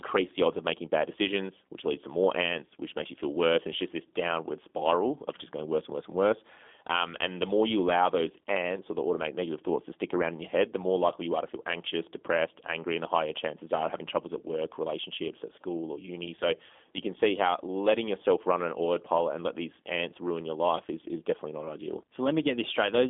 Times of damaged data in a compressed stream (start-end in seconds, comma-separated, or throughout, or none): none